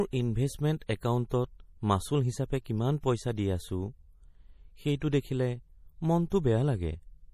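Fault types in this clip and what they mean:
MP3 compression: The speech sounds plainly watery and swirly throughout, and nothing reaches above 15.1 kHz. The cause is likely a starved MP3 encode, fitting about 40 kbps. The encoder cut the treble and let weak frequency lines flicker between frames.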